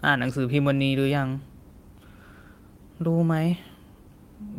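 A short bit of speech, and nothing in it goes wrong technically that a listener would pick up on.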